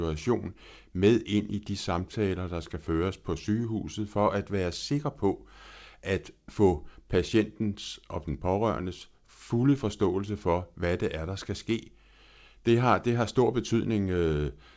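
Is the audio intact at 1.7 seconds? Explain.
Yes, the speech at 1.7 s comes through intact with no dropout, glitch or distortion, carried over the call path whose wideband coding tops out at 8 kHz.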